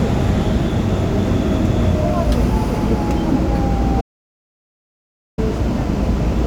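Everyday sounds, with an audio dropout to silence from 4.01 to 5.38 s. Unlike a quiet pause, the gap has no room tone at all, likely from lost input.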